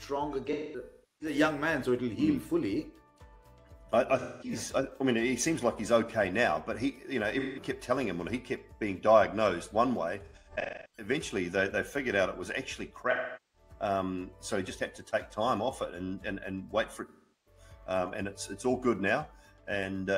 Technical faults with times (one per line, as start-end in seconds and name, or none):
0.52-1.35 AAC frame loss with concealment
4.19-4.51 AAC frame loss with concealment
7.39-7.63 AAC frame loss with concealment
10.25-11.08 AAC frame loss with concealment
13.11-13.69 AAC frame loss with concealment
17.08-17.61 AAC frame loss with concealment